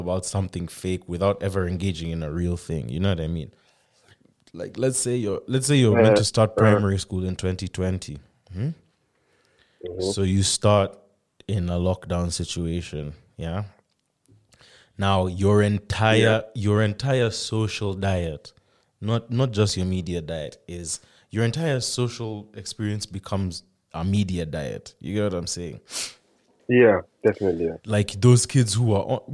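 No technical faults can be heard anywhere in this recording.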